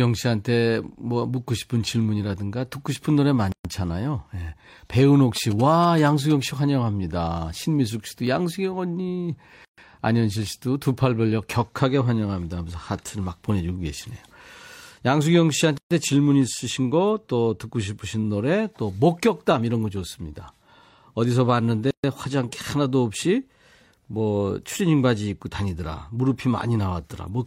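Separately encoded pieces of the speech have been joined without trimming the encoder's start-up delay or the padding on each piece's last frame. That leaves a gap at a join of encoded pieces: the speech drops into silence from 3.52 to 3.65 s, about 127 ms, with smeared edges, then resumes where it stopped. The same gap, about 130 ms each time, returns every 6.0 s, at 9.65 to 9.78 s, 15.78 to 15.91 s and 21.91 to 22.04 s.

Between 5.36 and 6.32 s, a nearby 2G phone in its signalling state sends short groups of radio bursts, which the audio circuit rectifies into sound. These GSM signalling bursts come through as a galloping dit-dit-dit of short buzzes at a 217 Hz rate, sitting roughly 15 dB below the speech and lasting just under a second.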